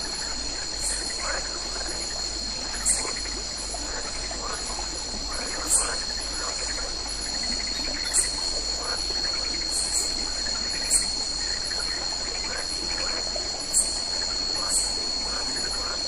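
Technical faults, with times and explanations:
Nothing here stands out as a technical problem; the audio comes through steady and intact with nothing to flag.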